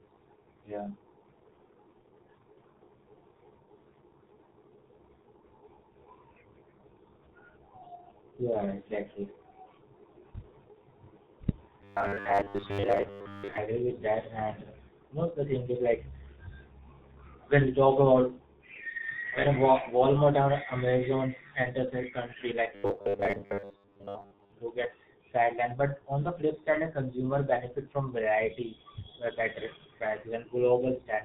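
G.723.1 codec damage runs throughout: nothing passes above 4 kHz, and the heavy, muffled hoarseness with smeared consonants fits a rate near 6 kbit/s. Robotic sound from repeated short buffers appears from 11.82 to 13.58 s, just before "with that", and again from 22.75 to 24.52 s, between "enters a country like" and "do get sidelined". Both times the speech becomes a rigid, metallic 100 Hz buzz, likely from roughly 10 ms buffers being replayed in place of most of the real audio.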